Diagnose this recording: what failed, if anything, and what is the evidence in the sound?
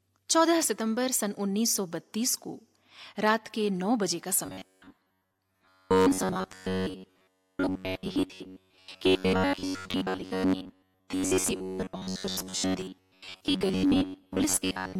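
Robotic sound from repeated short buffers, 4.46 s onward: likely driver-buffer underrun looping 10.7 ms segments, imposing a rigid 93.8 Hz buzz, seen as flat spectrogram harmonics.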